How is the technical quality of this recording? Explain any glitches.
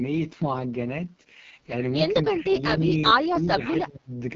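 The technical quality is poor, with heavy codec damage throughout and a stretch of suppressed speech near the end.

Across the whole clip the speech carries the coarse, raspy texture of an AMR wideband (HD Voice) codec running at its lowest rate, which fits the 6.6 kbit/s mode. At that rate the pulse-driven vocal tract model has too few bits to follow the voice, so it sounds rough and buzzy. Nothing is present above about 7.1 kHz, and the top band is shaped noise rather than real detail.

From 2.32 to 4.12 s the speech repeatedly dips by as much as about 10 dB, affecting roughly a second in total. The level drops in an uneven way. This is likely speech suppressed in double talk: with both ends talking at once, an echo canceller can't separate the near talker from loudspeaker echo and attenuates everything it hears.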